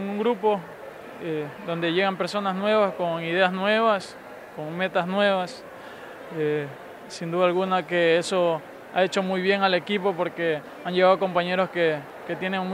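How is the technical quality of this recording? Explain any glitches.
One glitch stands out: a single sharp click at 12.10 s. It is most likely dropped samples, where a fraction of a millisecond of the stream goes missing and the waveform leaps to a later value. The click is instantaneous, with no audible gap or silence, which sets it apart from a dropout.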